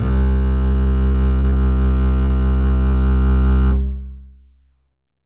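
From 0.72 to 1.58 s and again from 2.26 to 2.95 s, the music breaks up with repeated packet loss (robotic sound). Brief holes of up to about 40 ms are patched by prolonging the preceding sound, which appears as smeared, repeated blocks below the 4 kHz telephone-band ceiling.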